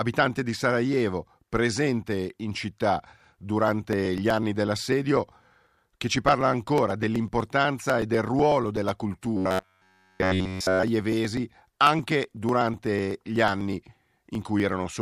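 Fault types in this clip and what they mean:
Periodic USB or driver dropouts: Something blocks the audio path every 0.124 s, and roughly a millisecond of sound is skipped outright each time rather than padded with silence. Each skip leaves a small discontinuity in the waveform, heard as a sharp tick. From 3.68 s to 14.85 s these ticks recur at that steady rate, around a hundred in all, roughly eight per second, clicking through the speech whenever there is signal.
Robotic sound from repeated short buffers: Between 9.37 s and 10.83 s the speech becomes a rigid, metallic buzz pitched at 93.8 Hz that only loosely follows the phrasing. The likely cause is fresh audio arriving too slowly, so the software loops the last block of roughly 10.7 ms, one cycle of that buzz, in place of new material. Almost none of the genuine speech survives in that stretch.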